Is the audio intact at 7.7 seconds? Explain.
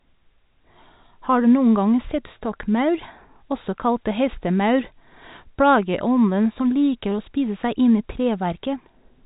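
Yes, the speech at 7.7 seconds is intact, carried only by its ordinary G.711 telephone coding, which limits it to the telephone band below 4 kHz.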